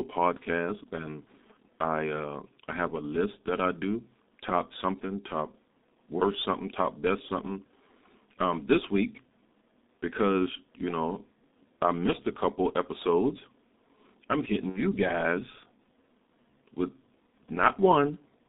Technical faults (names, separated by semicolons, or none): G.723.1 codec; VoIP packet loss concealed by the speech codec